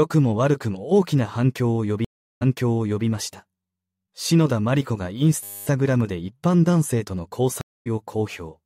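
At 2.05 s a stream reconnect breaks the audio: the connection dropped, the player fell silent for 365 ms, then restarted its decoder mid-stream. Playback picks up 650 ms earlier than where it stopped, so a stretch of sound repeats. The disturbance ends by 3.06 s.

From 5.44 to 5.67 s a system hang loop sounds as a steady 100 Hz buzz. The machine stalled while the sound hardware kept replaying the same 10 ms of buffer, 23 times over, and almost no audio is skipped when it resumes.

A second stream reconnect at 7.61 s leaves 246 ms of silence. Audio returns at 7.87 s about a tenth of a second further on, so a short piece of sound is lost.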